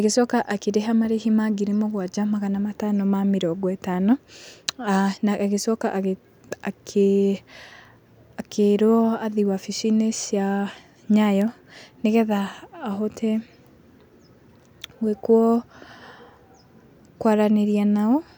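A speech recording with a single bit error spike at 11.42 s: a flipped bit throws two samples to about -17 dBFS and straight back, giving one sharp broadband tick. Unlike a dropout click, there is no gap or repeated chunk around it, and nothing recurs.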